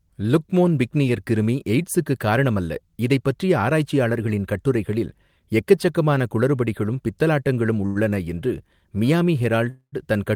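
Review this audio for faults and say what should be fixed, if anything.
At 7.86 s the speech hangs for about 91 ms, until 7.97 s. This is a short stall from a late packet. A packet missed its playout time and the jitter buffer ran dry. The receiver stretched the last sound to cover the wait, which gives a brief held tone. Playback then resumed from the same point. Nothing is lost, but everything after it now plays 91 ms later. A deeper or adaptive jitter buffer would absorb a delay this short.

From 9.70 s to 9.94 s the sound freezes for about 223 ms. This is a call audio freeze. The last sound carries on as a fading buzz and then drops to silence for about 90 ms before the speech returns. Speech picks up where it stopped, so nothing is skipped, but a 223 ms gap has been inserted. The likely cause is packets held up in transit, which emptied the jitter buffer. Improving network stability and prioritising voice traffic would help prevent stalls this long.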